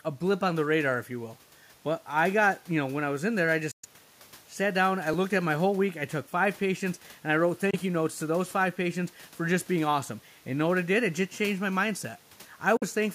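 At 3.71 to 3.86 s, right after "was in there I", the sound cuts to silence for about 0.14 s, a Bluetooth dropout. It was likely caused by wireless packets arriving too late at the headphones, and the gap fits roughly five lost packets. The speech comes back further along, as if it had kept playing. Unlike a skip, there is a true hole in which even the room noise, about 30 dB below the speech, vanishes.

At 5.14 s, between "sat down I" and "at my whole week", a dropped buffer (overrun) shows up as a jump in the sound. It was likely caused by the program failing to collect its samples before the hardware overwrote them. Only a tiny sliver, roughly a millisecond or two, is missing, and the two sides are spliced together directly. There is no silence, which is what separates it from the dropouts.

The Bluetooth dropout returns at 7.71 to 7.75 s, between "patients and I wrote" and "you notes to those", as a brief silent gap of about 23 ms. 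It comes back at 12.77 to 12.84 s as a gap of about 46 ms. Both resume further along.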